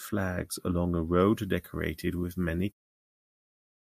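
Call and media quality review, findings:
Pre-emphasis left on, 1.20 to 3.69 s, carrying through the fade-out: speech thin and sibilant, treble about 8 dB hot at 10 kHz. Looks like a CD 50/15 µs boost never de-emphasised.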